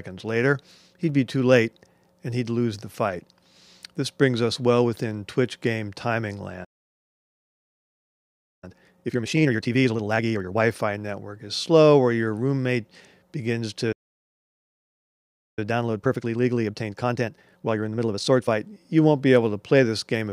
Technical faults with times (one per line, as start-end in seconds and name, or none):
6.64-8.64 playback stall
8.64-10.62 time-compressed catch-up
13.92-15.59 playback stall
15.59-18.59 time-compressed catch-up